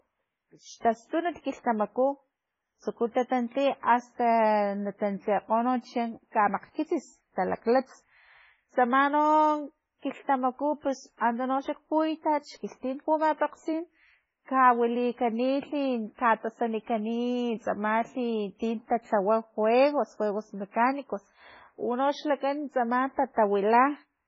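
Speech throughout is band-limited, with nothing above 7.7 kHz, and sounds watery and swirly, likely heavy MP3 compression at a very low bitrate near 16 kbps; unlike a plain low-pass filter, the swirl gives it away.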